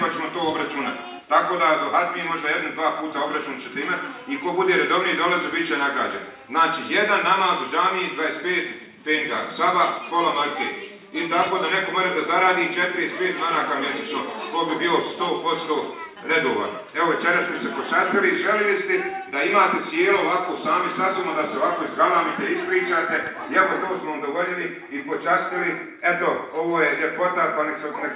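No faults can be heard in the signal, which arrives through a WebRTC call path whose narrowband sound with nothing above 4 kHz fits the G.711 mu-law codec at 64 kbps.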